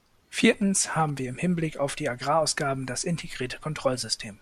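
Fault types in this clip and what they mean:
GSM signalling bursts: from 0.39 to 1.10 s, before "wir im", a nearby 2G phone's radio bursts are rectified into a galloping dit-dit-dit of short 217 Hz buzzes, roughly 20 dB below the speech.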